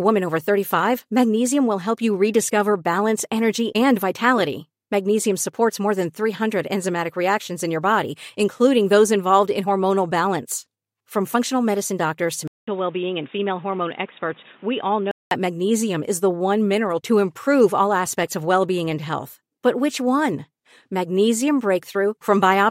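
A speech recording in which, from 12.48 s to 15.31 s, the sound abruptly turns dull and boxy, with nothing above 3.8 kHz, a drop in level of about 5 dB, and a new noise floor roughly 30 dB below the signal. A short silence of about 200 ms marks the change. The likely cause is an input switched to a poorer device, such as another microphone or a headset's call profile, whose narrower band, different gain and own background noise replace the original input until it returns.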